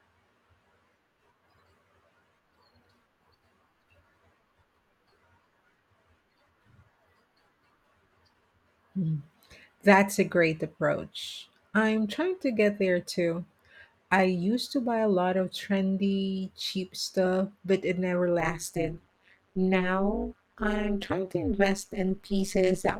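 From 18.4 s, just after "stuff but it never", to the end of the clip, the speech carries overlap-add ripple. The audio was split into windowed frames and rejoined with an overlap whose gains fail to sum evenly. So the level dips once per frame, by about 60 dB at the deepest. That cycle runs at around 200 Hz. It sounds like a harsh metallic buzz laid over the voice, with extra tones around it.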